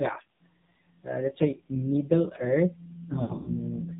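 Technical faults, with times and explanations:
Throughout: AMR narrowband mobile codec. Nothing above 4 kHz survives, so the speech is muffled and thin, with no sibilant detail. The damage is heavy. The voiced sound is buzzy and synthetic because the codec rebuilds it from a vocal tract model driven by a few pulses per 5 ms subframe, and at this low rate those pulses are coarse. The harshness fits one of the low AMR-NB modes, around 5.9 kbps.
3.22–3.50 s: lost AMR speech frames. Dropouts are scattered across about 240 ms, about 160 ms of audio in total. For each missing frame the decoder reuses the last good pitch and vocal tract settings at falling gain, so the short gaps are heard as brief dips and warbles. The longest run lasts about 80 ms. There the sound is smeared out and sags toward silence. It then returns weak and rough for a moment as the decoder recovers.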